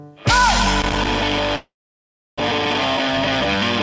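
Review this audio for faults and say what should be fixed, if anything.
From 0.75 to 1.08 s there's a burst of loose connector crackle: irregular scratchy clicks and pops over roughly a third of a second. That's a worn or dirty contact somewhere in the chain, making and breaking as the cable or plug gets moved, chopping the signal on and off and kicking out pops whenever there's a bit of DC sitting on the line. Fix it by cleaning or replacing that connector and strain-relieving the cable so it can't wiggle.

The second one runs from 1.56 to 2.42 s and sounds like a long network dropout. The last bit of sound gets stretched into a fading buzzy tail, then it drops to silence for about 680 ms. When the audio picks back up, roughly 620 ms of it is simply gone, and the timing has jumped by something like a fifth of a second. The likely cause is a run of packets that never arrived, with the receiver papering over the gap before giving up. 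That's plausible here, since the audio came through a call link (the top end stops at 8 kHz, which fits G.722). To prevent it, sort out the network path and give the jitter buffer more headroom so short stalls don't turn into lost audio.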